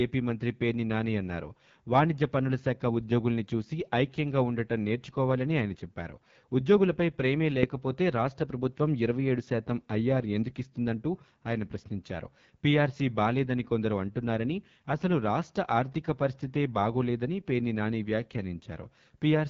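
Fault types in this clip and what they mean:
AMR wideband (HD Voice) codec: The speech has been through the AMR-WB coder at a low setting, and the damage is plainly audible throughout. At 8.85 kbit/s, one of the bottom rates, the pulse-excited vocal tract model cannot track the voice closely, so the result sounds rough and raspy. The band up to 6.4 kHz carries the modelled signal, the region just above it is filled with shaped noise, and nothing remains above about 7.6 kHz.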